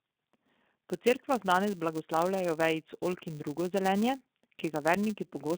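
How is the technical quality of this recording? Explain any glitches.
Pretty rough, honestly: two problems run through the whole speech recording, start to finish.

First, the G.729 codec damage, which sounds like the G.729A variant and fits its usual 8 kbit/s rate. The codec doesn't store the waveform. It models the vocal tract plus a pitch predictor and fills each frame with a handful of pulses, so the voice comes back slightly synthetic and gritty. The band is also squeezed to roughly 200 Hz up to 3.7 kHz, with nothing at all above that, which gives the flat, boxy phone-line tone. The damage is plainly audible.

Second, the filter restarted on every block. Some filter in the chain drops its memory at every block boundary and starts again from silence, so each block opens with a small transient. Those land about every 5 ms, which adds up to a steady 200 Hz buzz under the speech. Because the transients scale with the signal, the buzz swells on louder syllables and fades back in the quieter stretches.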